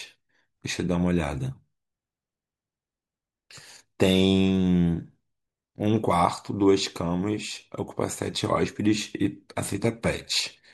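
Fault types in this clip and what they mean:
No technical faults are audible anywhere in the recording.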